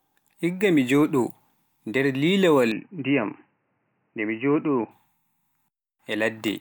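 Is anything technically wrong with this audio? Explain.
Yes. From 2.72 to 4.91 s, just after "nder lilawaal", the speech turns dull and boxy, with nothing above 3 kHz and a faint new background noise, then clears again. The input was likely switched to a poorer device, a narrower-band microphone path, with no gap at the switch.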